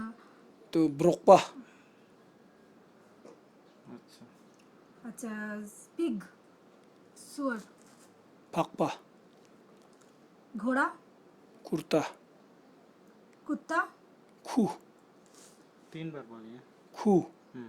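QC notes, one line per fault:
No technical faults are audible anywhere in the signal.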